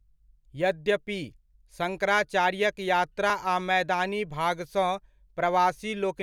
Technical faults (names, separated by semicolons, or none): periodic USB or driver dropouts